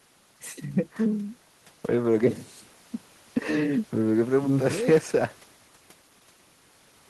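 No technical faults can be heard in this recording.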